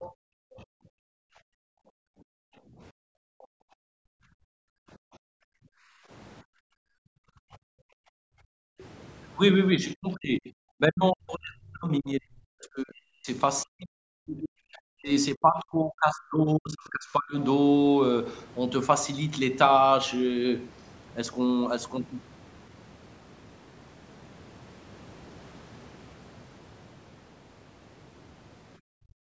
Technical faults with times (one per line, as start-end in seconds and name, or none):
0.01-0.12 other side's voice leaking through
0.12-6.10 background gated by the echo canceller
3.42-3.46 other side's voice leaking through
6.43-8.79 background gated by the echo canceller
8.79-8.84 other side's voice leaking through
9.79-13.28 speech suppressed in double talk
13.63-17.35 speech suppressed in double talk
28.88-29.23 speech suppressed in double talk